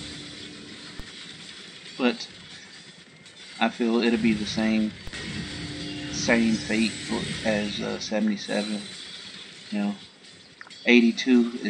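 DC steps at 1.00 s and 5.07 s: the waveform's zero line jumps by about -23 dBFS, and a 20 Hz high-pass lets each offset decay. Each jump is heard as a low thump while the audio continues unchanged.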